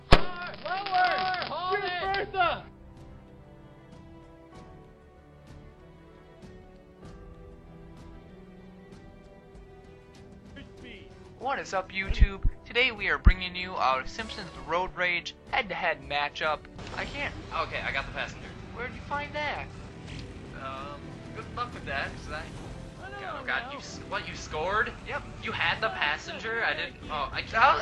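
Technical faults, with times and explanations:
18.82 to 20.18 s, Bluetooth SBC bit pool drop: the top bands thin out and quantisation turns gritty, which fits a bit pool cut from 28 to 12, around 96 kbps.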